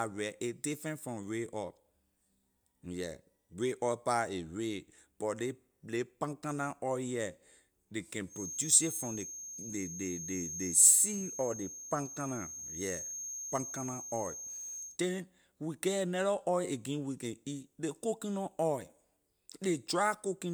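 After "ley can", at 8.26 s, a feedback whistle starts. It is a thin, steady tone at 6.4 kHz, sitting about 10 dB below the speech. Its level swells and fades slowly but never builds. It runs until 14.99 s, ending just before "then we get another". The likely cause is a loudspeaker-to-microphone loop held right at the edge of feedback. One high frequency keeps ringing there without running away.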